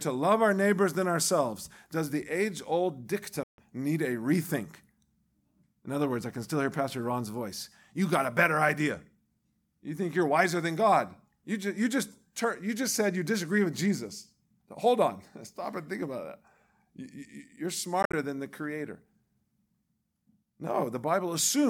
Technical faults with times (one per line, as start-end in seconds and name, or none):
3.43-3.58 Bluetooth dropout
18.02-18.14 Bluetooth dropout